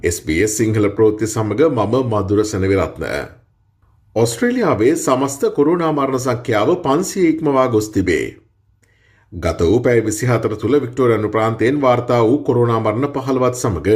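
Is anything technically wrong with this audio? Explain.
No, the signal comes through intact, with nothing in it that points to a technical problem anywhere along its path.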